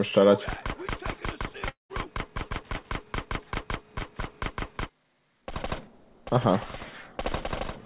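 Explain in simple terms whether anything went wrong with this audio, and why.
At 1.68 s the sound smears into a fading buzz, then goes quiet until about 1.91 s. This is likely a long network dropout. About a fifth of a second never arrived. The audio resumes with that part missing. The call line itself carries nothing above 4 kHz.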